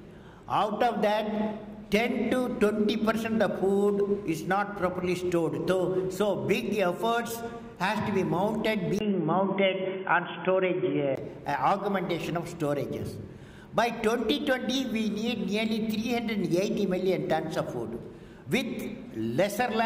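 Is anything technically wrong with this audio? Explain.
Yes. From 8.99 s to 11.17 s the sound turns dull and boxy, with nothing above 3.4 kHz, and a faint new background noise sits well below it while the level stays about the same. A gap of about 20 ms marks the switch in. The likely cause is the input switched to a poorer device, such as another microphone or a headset's narrowband call profile, which passes a much narrower band before the original input returns.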